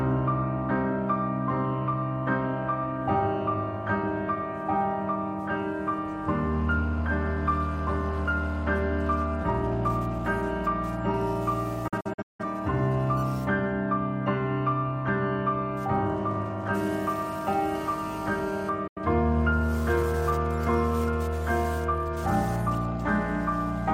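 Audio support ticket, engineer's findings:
Digital broadcast dropout, 11.88–12.44 s: sound mutes in several short holes with quick 8 ms fades, about 300 ms gone over roughly half a second, longest gap about 170 ms. Fits seven failed frames at the receiver, muted until good frames resumed. Again at 18.87–18.98 s, 85 ms lost, fits two frames.

GSM phone buzz, 17.75–18.69 s: hard, raspy 217 Hz buzz full of harmonics, about 18 dB under the programme and unrelated to it. A nearby 2G handset's transmit bursts are getting rectified in the audio path. Steady throughout, so the phone was probably mid-call.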